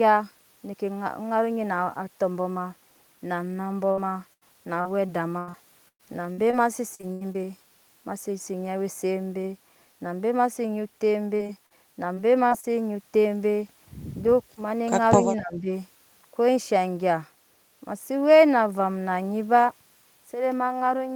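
Speech, marred by two stretches of repeated packet loss (robotic sound) and one brief dip. From 3.91 to 7.36 s the signal breaks up fourteen times. About 700 ms of audio is missing, the longest hole is 110 ms, and roughly 19% of that span is filled by stretching the previous sound. The result is choppy speech with pieces missing. A shorter burst follows from 11.36 to 12.65 s with six holes totalling 160 ms, none longer than 39 ms, and about 12% of the span concealed. At 15.23 to 15.71 s the talker's level sinks by roughly 10 dB for around 400 ms. This is likely speech suppressed in double talk, where the echo canceller, confused by simultaneous speech from the far side, attenuated the near talker along with the presumed echo.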